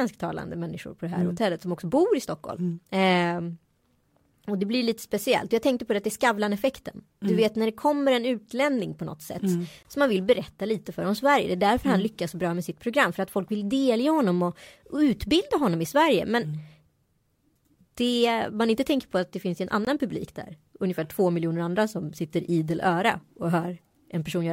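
Two 20 ms gaps between chunks cut the speech at 9.83 s and at 19.85 s, after "att det finns en", repeating every 10 s as hard-edged silences at chunk joins.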